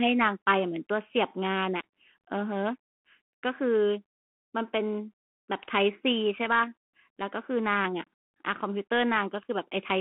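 Speech, heard throughout through a Bluetooth CVSD headset codec. The band runs only from 200 Hz to 3.4 kHz. The one-bit adaptive coding leaves plainly audible granular damage, which fits a 64 kbps link.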